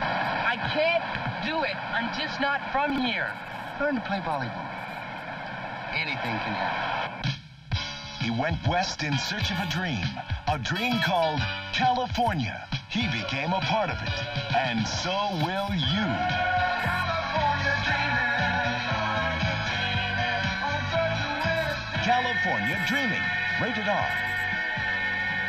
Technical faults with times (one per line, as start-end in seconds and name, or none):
2.90-2.98 chunks out of order